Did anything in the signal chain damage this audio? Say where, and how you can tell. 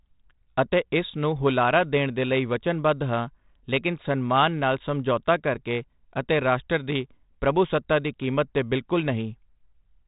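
No, the speech is band-limited to telephone width by 32 kbit/s G.726 ADPCM, with only the light, level-following grain that coder leaves at that rate, which is working as designed rather than damage from any stage of the chain.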